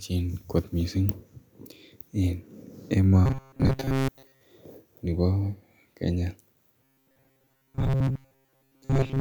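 Robotic sound from repeated short buffers, 3.26 to 4.41 s and again 6.81 s to the end: the speech turns into a rigid metallic buzz at 134 Hz, likely from audio arriving too seldom, so a segment of about 7.5 ms is replayed for around 70 percent of the time.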